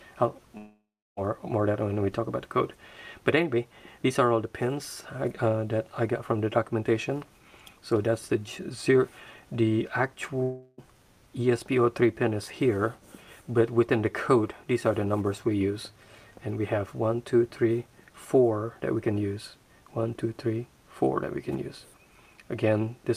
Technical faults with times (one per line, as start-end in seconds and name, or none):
0.57-1.19 long network dropout
10.43-10.80 long network dropout